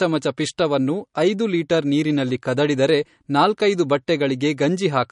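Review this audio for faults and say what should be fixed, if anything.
Throughout the speech, the plainly audible coding damage and the dead treble above 10.5 kHz point to likely MP3 compression at a low bitrate, around 40 kbps. A spectrogram shows a flat ceiling at 10.5 kHz with flickering gaps below it. Keep a higher-bitrate or lossless master and encode once.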